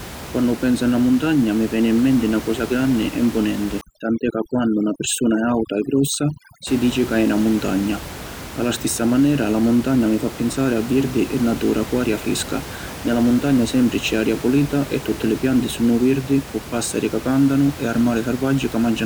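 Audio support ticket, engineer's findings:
Denoising artefacts from 3.81 s to 6.67 s, after "cosa granni e mpunenti" and before "dici ca è na". Background drops and breaks up into twinkling specks. Overdone noise removal: the denoiser is set too strong, switching off single frequency bands near its noise estimate and taking quiet speech detail with them. Room noise, about 14 dB below the speech, is not a system fault.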